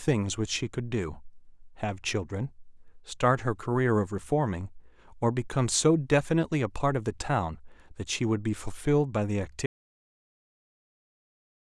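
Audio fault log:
9.66 s to end: audio dropout to silence. Speech cuts off abruptly and the remaining two seconds are silent with no room tone beneath. The input signal was likely lost while the recorder kept writing silence, so nothing from this span survives.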